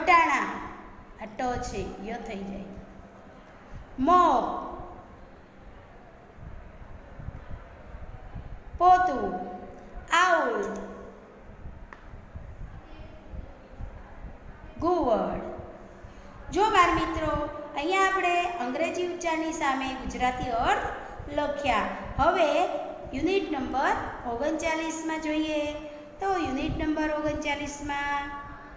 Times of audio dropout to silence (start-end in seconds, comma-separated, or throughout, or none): none